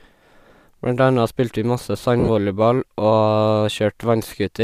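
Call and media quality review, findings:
Lost LE Audio frames, 2.20 to 2.29 s. The speech breaks into a brief noisy smear. About 70 ms drops out, scattered over 80 ms, with the longest gap around 40 ms. The LC3 decoder fills the gaps by repeating the last spectrum with random signs. The gap pattern fits 10 ms frames.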